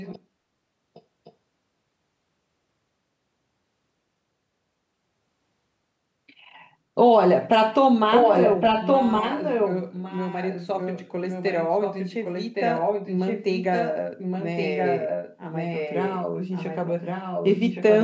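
Echo leak appears in this speech at 0.0–0.21 s, 0.94–1.02 s and 1.24–1.33 s as faint scraps. It returns at 8.1–9.76 s roughly as loud as the speech, then at 9.92–13.97 s, 14.17–16.22 s and 16.51–18.02 s about 10 dB down. Each time, a copy trails the speech by 1.12 s. This is likely a far-end loudspeaker's echo canceller passing back what its microphone picked up.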